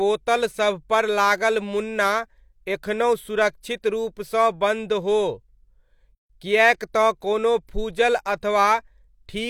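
At 6.15 s the speech drops into a 144 ms silence before "किएक तँ कोनो". This gap at a join of encoded pieces comes from untrimmed encoder delay and padding.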